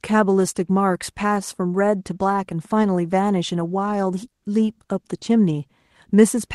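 At 5.17 to 5.23 s, short concealed packet loss: about 40 ms of speech arrived too late, so the decoder extrapolated the preceding sound, leaving a brief smear.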